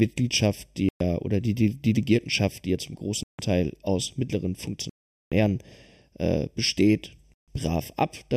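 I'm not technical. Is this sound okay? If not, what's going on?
No. The speech sounds hollow all the way through, a bit like someone talking into a tube. This is channel delay (comb filtering): one side of the stereo signal arrives a fraction of a millisecond later than the other, roughly 0.4 ms, and when the two are combined into one, certain pitches cancel out at regular steps, starting at around 1.5 kHz. Those fixed gaps are what take away the natural fullness.

The sound also cuts out completely four times and then carries on. The first gap runs from 0.89 to 1.01 s, just before "oder die die". Another runs from 3.23 to 3.39 s, just after "die ja zum", and the longest, almost half a second, runs from 4.90 to 5.32 s, after "aus mittleren". The last runs from 7.34 to 7.48 s. These are most likely Bluetooth stalls: interference held up the wireless data, the headphones ran out of audio to play and paused until it arrived.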